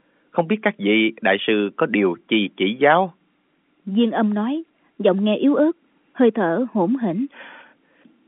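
No faults found in the speech; the G.711 telephone coding is working as expected, with the line band limited to roughly 200 Hz to 3.5 kHz.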